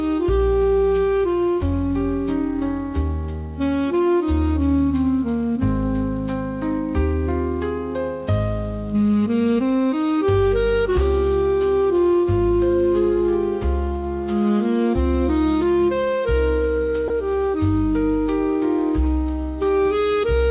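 At 17.08 s the sound briefly gives way to a flat, steady hiss for about 20 ms before resuming, likely sound dropped by the voice detector with comfort noise filled in. Unlike packet-loss concealment, nothing of the preceding sound is stretched or repeated. The band stops at 4 kHz, which fits G.711 at 64 kbps.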